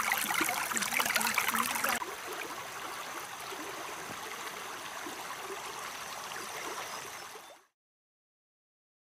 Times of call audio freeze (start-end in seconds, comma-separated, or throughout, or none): none